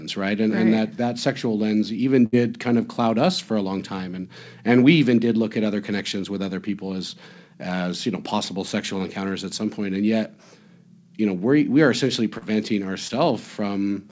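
Just after "that sexual lens even", from 2.26 to 2.34 s, there's a burst of packet loss. About 60 ms of audio never arrived, so the receiver stretched the last sound and faded it down before jumping ahead to "kind of cloud us". Later, at 12.38 to 12.44 s, right after "we we are essentially", and again at 13.08 to 13.11 s, you get short concealed packet loss. Each hole, roughly 40 ms and then 20 ms, was patched by extending the preceding sound and blending back in, which comes across as a quick smear or wobble. Through all of it the call path cuts everything above 8 kHz, which fits G.722.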